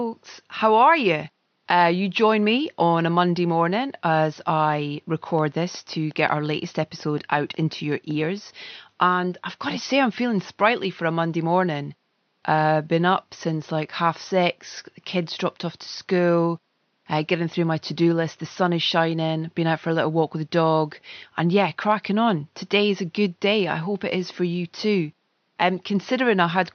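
From 5.39 s to 8.12 s, right after "morning as I", a steady ticking runs over the speech: a train of clicks at about 5.5 per second, evenly spaced, roughly fifteen in all, each peaking at around the level of the speech itself, and audible against the quiet room noise some 49 dB down. The near-identical, regularly paced pulses point to something injecting a repeating spike, likely electrical interference or a faulty connection or power supply.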